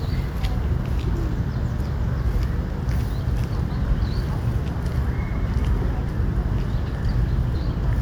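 A brief smeared blip at 6.08 s and again at 7.54 s, where the sound jumps ahead by about a fifth of a second, then a tenth: compressed frames skipped, whole frames of roughly 26 ms lost before playback.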